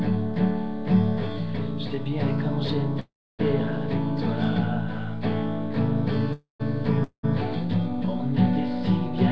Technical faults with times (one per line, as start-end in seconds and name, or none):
3.00-3.41 call audio freeze
6.33-6.62 call audio freeze
7.04-7.25 call audio freeze